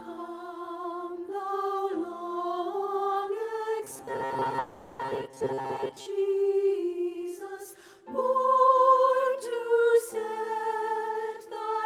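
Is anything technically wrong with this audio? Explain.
Yes, two faults overlap in the middle of the clip.

From 3.84 to 6.06 s there is robotic sound from repeated short buffers: the audio becomes a rigid, metallic buzz locked at about 134 Hz, still loosely tracking the underlying sound. The likely cause is audio arriving too seldom, so the player keeps looping the last short buffer, roughly 7.5 ms, which fits that 134 Hz pitch. About half of the sound in this stretch is repetition, with the skipped material simply lost.

Inside that stretch, from 4.59 to 5.01 s, comes a long network dropout. Rather than going quiet, the audio carries on as a fading concealment buzz or hiss for the full 400 ms, with no silent gap, and the sound resumes further along with 400 ms of the original missing. That pattern likely points to a network interruption during which no packets reached the receiver, which then papered over the hole by extending the last sound.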